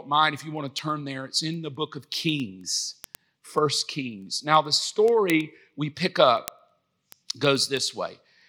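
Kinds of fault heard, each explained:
Word clock ticks, 0.14 to 8.41 s: the speech carries sharp ticks at a steady rate of about ten per second, around seventy in all, uneven in strength. The receiving device is running on its own clock rather than locking to the digital link's sender, and the two drift apart by roughly a couple of hundred parts per million. Each time they slip past each other a single sample is dropped or repeated, producing a tick.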